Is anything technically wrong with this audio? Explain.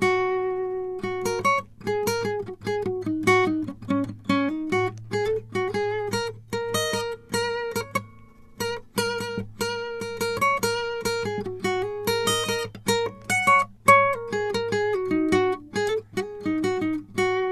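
No, nothing in this music stood out as technically wrong on listening.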